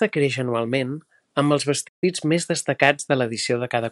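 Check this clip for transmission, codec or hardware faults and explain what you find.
One fault is audible: a playback stall in the middle of the speech. At 1.88 s the sound stops dead. It stays silent until 2.04 s, a gap of 143 ms. The likely cause is the player running out of data, or its output thread being blocked. While that lasts, nothing reaches the output. The speech breaks off mid-flow, leaving a clear hole, then resumes once playback recovers.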